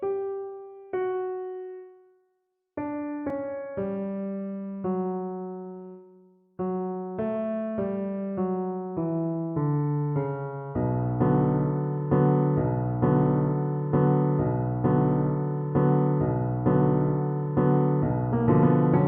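At 3.30 s there is a block of digital silence: about 2.2 ms of samples replaced by zeros, likely because the output buffer was not filled in time. Being so short, it sounds like a tick or dip, not an audible gap.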